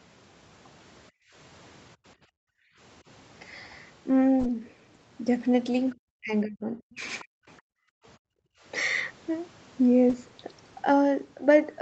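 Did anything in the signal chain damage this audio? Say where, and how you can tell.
Yes, and the damage all comes from the call-processing stage, specifically the echo canceller.

The room background ducks away abruptly three times in this speech: from 1.11 to 1.34 s by about 34 dB, from 2.17 to 2.78 s by about 40 dB, and from 7.61 to 8.64 s by about 40 dB, each time snapping back afterwards. This is background gated by the echo canceller. While the far-end loudspeaker played, the canceller clamped the microphone gain hard, and the ambience vanished with it until the gate released.

From 5.9 to 5.95 s a faint, brief second voice appears, roughly 35 dB below the main talker. It is too short and quiet to follow, just a scrap sitting under the signal. This is likely the other side's voice leaking through, where loudspeaker sound picked up by the microphone survived the echo canceller's subtraction and reached the outgoing audio.

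The talker's own speech collapses from 6.2 to 7.03 s, dropping by around 35 dB, and again briefly from 7.23 to 7.32 s, by around 40 dB. This pattern is likely speech suppressed in double talk. With both ends talking together, the canceller could not separate near-end speech from echo and attenuated everything.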